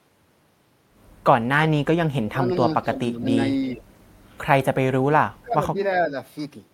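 Speech suppressed in double talk pulls this speech recording down at 2.27–2.44, 2.82–3.25, 3.75–3.83, 5.0–5.67 and 6.07–6.14 s. The deepest drop, around 30 dB, comes near 5 s. This is likely an echo canceller mistaking overlapping far-end talk for echo and ducking the talker.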